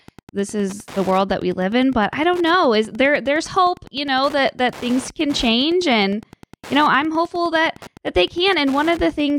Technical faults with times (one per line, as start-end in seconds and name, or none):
0.00-9.38 Wi-Fi interference